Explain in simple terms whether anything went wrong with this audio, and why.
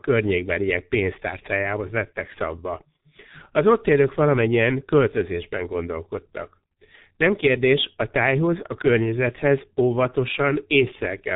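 Throughout, the speech went through the G.723.1 codec, which cuts everything above 3.8 kHz and crudely simplifies the voice, leaving it muffled and hoarse.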